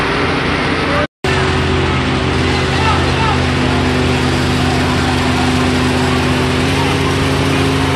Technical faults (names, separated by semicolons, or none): drift correction step